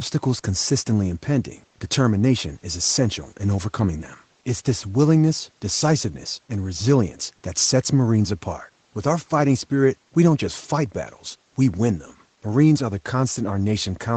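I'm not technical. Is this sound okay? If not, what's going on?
Yes, there's nothing wrong here; it just sounds like it went through a call's normal microphone processing, which trims away the very deepest bass and is exactly what you'd expect.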